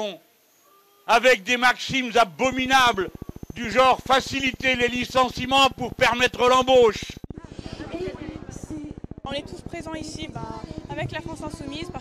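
From 2.45 s to 11.97 s the audio carries a train of clicks: near-identical ticks at a regular 14.4 per second, around 150 in all, peaking at about the level of the sound itself and audible in pauses, likely interference from nearby equipment or a faulty connection or power supply.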